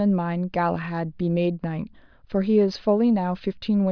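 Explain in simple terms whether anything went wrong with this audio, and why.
Nothing went wrong with this recording of speech.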